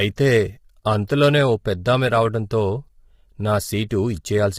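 Throughout the speech, the audio was most likely squeezed through low-delay AAC compression at a low rate, consistent with about 24 kbps. Its short frames resolve pitch harmonics poorly, so the voice sounds rough and grainy, with noise between harmonics and a dulled, synthetic top band.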